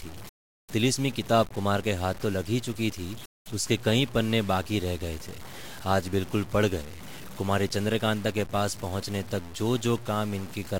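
From start to finish the speech carries a grainy, fizzy distortion that rides along with the signal, roughening quieter passages and making the softest moments sputter or drop out between steps. This points to low bit depth without dither: the audio was likely cut to about 6 bits by truncation rather than rounding with added noise, so the error tracks the waveform, sitting only around 20 dB below the signal.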